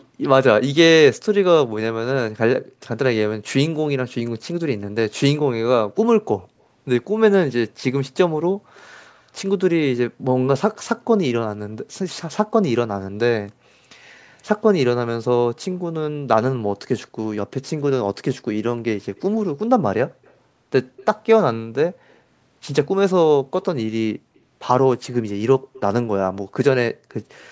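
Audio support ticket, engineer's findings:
Echo leak, 0.0–0.05 s, 6.41–9.22 s, 10.75–12.71 s, 15.72–27.14 s. Faint delayed second copy of the speech trailing the talker by about 175–180 ms. Level roughly 30 dB down at the start, about 35 dB down in the middle stretches, rising to about 25 dB down in the long final run. Likely far-end echo canceller failing to fully remove loudspeaker pickup, residual sent back. Steady delay points to a fixed acoustic path.

Background gated by the echo canceller, 2.61–2.8 s. Room tone dips sharply, as much as about 40 dB, for roughly 200 ms, then recovers. Canceller clamped the microphone while loudspeaker playback was active, suppressing ambient sound along with the echo. Brief hole in the noise floor, audible as a dropout. Band limit at 8 kHz from call mic processing is expected.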